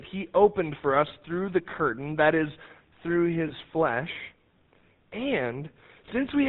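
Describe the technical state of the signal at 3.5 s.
At 3.5 s, just after "curtain that is through", there is a lost GSM frame between 3.48 and 3.52 s. Roughly 20 ms of audio, one frame's worth, was missing, and the decoder filled the gap by repeating the previous frame's parameters. That produces a brief metallic, ringing smear in place of fresh signal.

Underneath it, the whole clip carries the GSM full-rate codec. The band is cut at 4 kHz, and the regular-pulse excitation gives the speech a plainly audible buzzy, gravelly texture, consistent with the 13 kbps full-rate coder.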